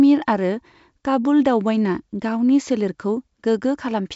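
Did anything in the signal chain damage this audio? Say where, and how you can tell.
No, nothing in the chain has damaged this speech. It has gone through G.722 wideband telephone coding at what sounds like the full 64 kbit/s rate, with the band ending at 7.7 kHz and at most a faint trace of the coding.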